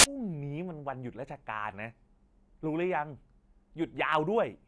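A harsh, very loud burst of white-noise static with hard edges opens the clip from 0.00 to 0.04 s, where file tags played as audio turn an embedded cover picture's compressed data into samples.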